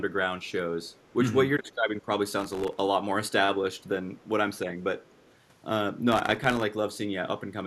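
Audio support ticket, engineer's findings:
Processor overload crackle, 2.40–2.79 s and 6.12–6.63 s. Gritty tearing bursts. Dozens of sub-millisecond buffers missed in a row, each dropped to silence. CPU load.

Echo leak, 3.78–3.83 s, 4.18–4.24 s, 5.02–5.34 s. Faint delayed speech copy, 218 ms behind, far below the voice. Likely far-end echo canceller residue.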